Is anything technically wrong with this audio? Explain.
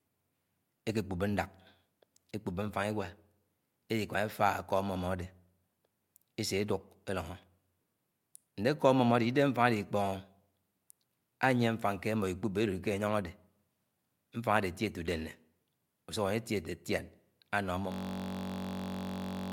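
Yes. From 17.92 s to the end of the speech clip, the audio falls into a system hang loop. The machine or its audio driver stopped supplying new samples, and the output hardware kept replaying the same ring buffer. A 21.33 ms segment, which fits a 1024-sample buffer, repeats about 75 times. At roughly 46.9 repeats per second, the short loop fuses into a steady, rough buzz at that rate, replacing the speech entirely until the clip ends.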